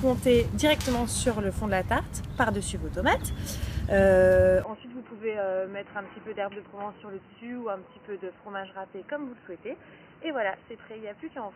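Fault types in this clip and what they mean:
input switched to a poorer device: from 4.64 s the sound turns dull at once, with no gap, likely from a change of input device. On a spectrogram everything above 3 kHz vanishes and a new noise floor appears, roughly 30 dB below the signal, while the waveform shrinks by about 10 dB.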